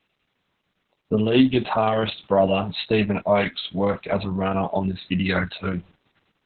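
From start to finish the speech carries heavy Opus voice compression. Nothing gets through above 4.3 kHz, so it's squeezed to narrowband, and the coarse SILK excitation coding leaves it muffled, hoarse and a bit robotic, which fits a bitrate down around 6 kbps.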